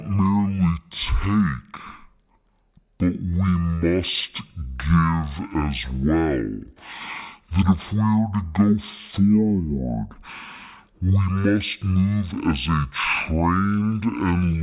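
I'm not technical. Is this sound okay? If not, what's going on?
No. The whole clip has a wrong sample rate fault. It plays at half speed, so the speech is slow and an octave lower in pitch. This points to audio recorded at 16,000 samples per second being played back at only 8,000.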